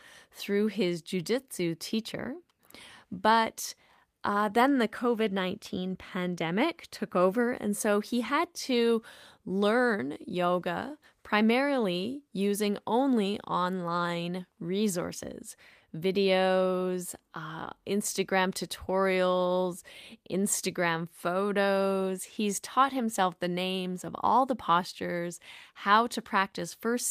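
No technical faults occur anywhere in the recording, so there are none to describe in time order.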